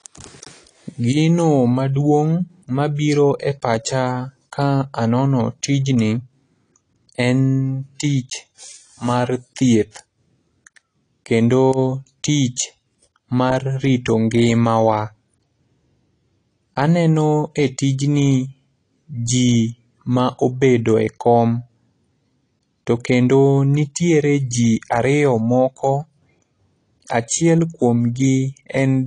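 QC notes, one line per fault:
Throughout: AAC compression. The speech has no content above about 10.2 kHz and sounds dull, with sibilants turned fizzy and smeared and a warbling texture on sustained sounds. The damage is plainly audible for the whole clip. This is likely lossy AAC-LC coding at a low bitrate, which fits about 32 kbps: the encoder cuts off the top band and quantises the remaining frequency lines coarsely, so detail drops out and some bands are left as holes or filled with substitute noise.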